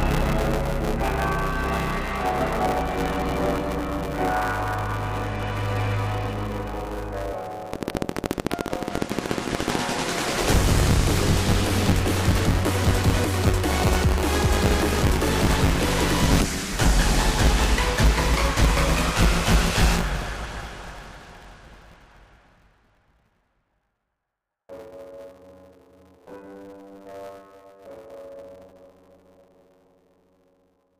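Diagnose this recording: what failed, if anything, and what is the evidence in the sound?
Buffer tearing runs throughout: a steady 100 Hz robotic buzz sits on the sound whenever signal is present. At the driver or buffer stage, writer and reader have slipped, so roughly two fifths of each period replays audio about 20 ms old, joined by hard edges.

A train of clicks runs from 7.74 to 9.76 s: some thirty similar pulses at a regular 13.9 per second, well above the signal level, around 15 dB. The likely cause is interference in the analogue wiring or a faulty connection or power supply injecting near-identical impulses.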